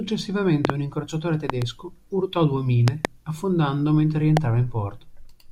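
Loud pops hit at 0.65 s, 1.50 s after "un incrociatore", 2.88 s after "urtò due" and 4.37 s after "affondando mentre". The first three are quick doubles and the last is a single, each around 20 dB over the speech, which carries on underneath. They're likely voltage spikes from a plug, switch or static.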